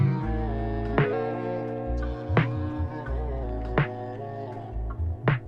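From 1.13 s to 3.43 s the sound runs about 1.09 times fast and sits roughly 1.5 semitones sharp, brighter and hurried. This is a wrong sample rate fault: samples replayed unconverted at a higher rate, which fits 44.1 kHz material played at 48 kHz.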